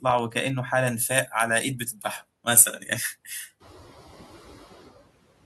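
Noise suppressor artifacts run through the whole clip. The suppressor estimates which frequency bands hold steady background noise and pulls them down, here by about 11 dB, frame by frame. The noise floor sinks in the pauses and climbs back under the speech. What survives flutters and warbles, and the speech takes on a thin, watery edge. This is most noticeable after about 3.5 s, when the room noise rises by about 14 dB and sits roughly 16 dB under the speech.

Pre-emphasis left on begins at 0.87 s and lasts to the end. The treble was lifted along the standard 75 µs FM curve, but the matching de-emphasis that should restore a flat response was never applied. High frequencies stay boosted by about 13 dB at 10 kHz relative to 1 kHz, so from 0.87 s on the speech turns bright, thin and hissy, with exaggerated sibilants.

Speech cut by the noise suppressor occurs between 1.79 and 2.05 s. Here the suppressor misread low-level parts of the speech as background and turned them down along with the noise, by about 9 dB at the deepest point. 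Roughly a tenth of a second is affected in total. The affected speech in that stretch sounds swallowed and faint, as though the talker briefly dropped away from the microphone.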